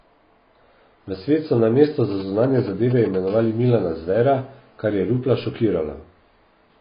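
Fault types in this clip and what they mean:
AAC compression: The speech is dull and smeared throughout, with nothing above 5 kHz. The high band has gone entirely and sibilants have a fizzy, warbling texture. On a spectrogram the energy stops at a flat ceiling near 5 kHz, and the region below it has gaps and blotchy patches where bands were dropped or roughly filled. This is likely low-bitrate AAC-LC, around 16 kbps, which would explain the heavy coding damage.
GSM signalling bursts: From 2.11 to 3.16 s, a nearby 2G phone exchanging control traffic with its network produces a galloping dit-dit-dit of short raspy buzzes, roughly 15 dB below the speech. The circuit rectifies the radio bursts into audio. On a spectrogram it shows as clustered vertical stripes and brief stacks of harmonics on a 217 Hz spacing. The waveform shows groups of sharp spikes separated by gaps.
GSM phone buzz: From 3.28 to 5.22 s a steady, hard buzz at 217 Hz runs under the speech at about 28 dB below it. 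This is a 2G phone in a call, transmitting 217 bursts a second that the audio circuit demodulates into a pulse train unrelated to the signal. A spectrogram shows a dense comb of evenly spaced horizontal harmonic lines at multiples of 217 Hz. The waveform carries a regular ripple of narrow pulses about 4.6 ms apart.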